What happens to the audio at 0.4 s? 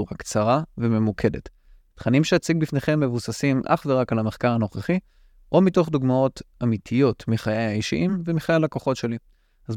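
At 0.4 s the speech plays through cleanly, with no fault of any kind.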